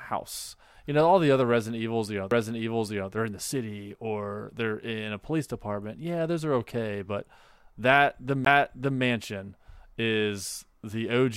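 At 2.31 s, just after "know all the other" and before "they're in the city", and again at 8.45 s, the speech ticks, drops out for a few milliseconds, and resumes elsewhere. This is a CD skip: a knock or disc flaw threw the laser onto another turn of the spiral.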